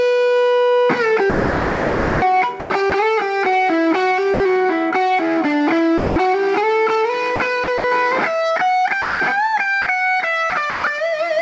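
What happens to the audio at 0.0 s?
Nothing goes wrong at 0.0 s: the audio starts cleanly through the call path, with the usual band limit leaving nothing above 8 kHz.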